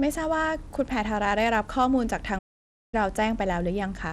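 From start to finish the speech carries the sound of Bluetooth SBC compression: the treble is thin and unsteady, and a gritty, grainy noise rides along with the voice, plainly audible throughout. The likely cause is a low bit allocation across SBC's few wide sub-bands, which fits a link running at around 96 kbps. Unlike MP3 or AAC smearing, the damage is coarse and evenly spread rather than swirly or pre-echoed.

At 2.38 s the audio simply stops, leaving silence until 2.94 s, a gap of about 0.54 s, before the speech continues. This is a playback stall, likely from the player running short of data or being blocked. It is clearly longer than a brief dropout or click, and the break is clean silence.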